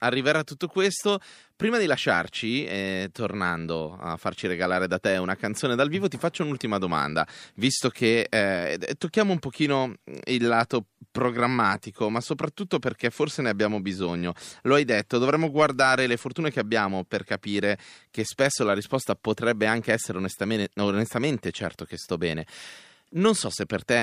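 Nothing in this recording stands out as a technical fault; the speech just carries on from beginning to end without any glitch worth pointing to.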